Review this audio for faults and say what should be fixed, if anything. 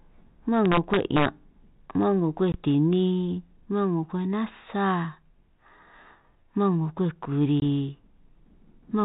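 Integer overflow, from 0.66 to 1.26 s and again at 2.93 s. The loudest peaks of the speech ran past the largest value the integer path can hold. Instead of being held at the ceiling, they wrapped around to the opposite extreme, so each crack jumps across the full range and sounds far harsher than ordinary clipping. In the first stretch the level overshot by about 2 dB. At 2.93 s it sat right at the limit, so it only just tipped over. Prevent it by using saturating arithmetic, or by adding headroom before the gain or summing stage.

Packet loss on an ADPCM call, at 2.52 to 2.58 s and 7.60 to 7.63 s. Each gap is a hard-edged 20 ms hole, about one packet's worth, filled with silence. Because ADPCM carries only differences from an adaptive prediction, the receiving decoder's predictor and step size lose track of the sender's during the hole. When the speech resumes it comes back slightly distorted, then settles within tens of milliseconds. 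The rest of the link sounds like 32 kbit/s G.726, with light coding damage and nothing above 4 kHz. Prevent it with packet loss concealment that also resets or re-syncs the decoder state, plus adequate jitter buffering on the network path.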